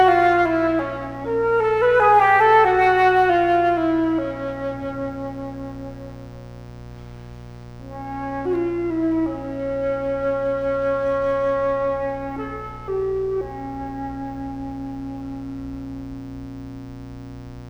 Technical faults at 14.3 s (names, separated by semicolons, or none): mains buzz